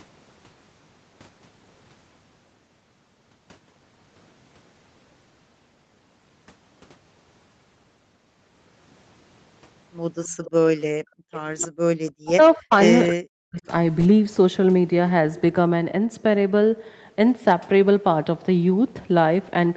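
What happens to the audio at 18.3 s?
At 18.3 s the speech is intact, with no dropout, click or distortion, only the ordinary call-path sound of a band-limited Opus codec with nothing above 8 kHz.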